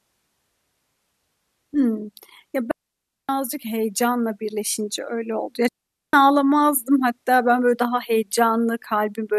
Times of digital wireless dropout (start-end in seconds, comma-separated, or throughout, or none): 2.71-3.29, 5.68-6.13